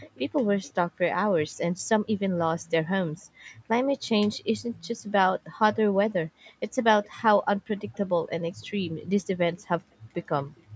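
From 0.00 to 0.73 s a faint delayed copy of the speech trails the direct sound by 356 ms, roughly 25 dB below it. The same copy returns from 5.74 to 7.98 s and from 9.58 to 10.63 s, slightly weaker at roughly 30 dB down, with the same 356 ms lag. This is likely echo leak: the far end played the call on a loudspeaker, and its echo canceller let part of that playback back into the microphone.

Between 3.32 and 3.68 s the background falls away sharply, dipping by about 40 dB for roughly 0.3 s before recovering. This is background gated by the echo canceller, which clamped the microphone down while the loudspeaker was active and released it once playback stopped. The band-limiting of the call microphone processing, with nothing above 8 kHz, is a normal part of the call chain, not a fault.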